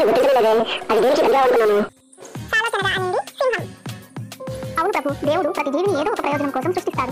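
Across the whole clip the sound runs at twice its proper speed and sits a full octave, 12 semitones, too high. This points to audio read two samples at a time (double speed): each pair of samples is treated as one frame, as if the data held two channels or wider samples, so playback covers the material twice as fast and strong content above a quarter of the sample rate folds back.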